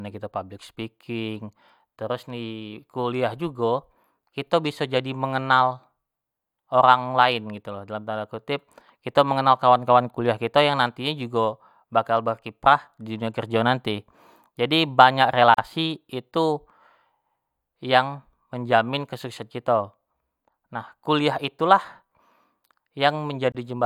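A gap at a join of encoded pieces appears at 15.54 s, a hole of about 41 ms, and again at 23.52 s, about 27 ms long. The speech was encoded in separate pieces and spliced without trimming, so each piece's encoder start-up delay and padded final frame remain as silence. The speech stops abruptly, with edges smeared by the codec, then resumes exactly where it broke off.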